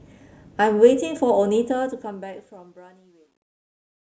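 From 1.63 s to the end, the fade-out shows truncation distortion. Too few bits, with no dither, fits roughly 11-bit resolution. From 2.66 s the speech turns gritty.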